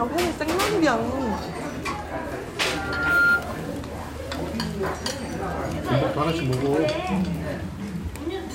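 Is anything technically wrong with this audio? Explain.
Yes. From 2.60 to 3.47 s there is loudspeaker feedback squeal. A microphone picks up its own loudspeaker, and the loop gain tops unity at 1.4 kHz. That tone swells over about half a second into a piercing whistle roughly 10 dB above the sound.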